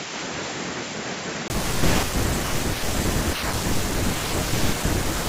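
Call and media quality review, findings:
Input switched to a poorer device, 0.0–1.5 s: speech dull, about 10 dB down, nothing above 7.6 kHz, faint extra noise floor, 20 ms gap at 1.5 s when it flips back. Likely a mic swap or headset call profile.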